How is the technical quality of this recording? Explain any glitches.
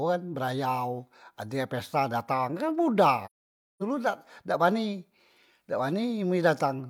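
The recording has one glitch: AAC frame loss with muting. From 3.25 to 3.83 s, the speech drops out for just over half a second. The decoder zeroed the missing frames' spectrum, and overlapping windows fade sound out and back in, leaving a soft-edged silence.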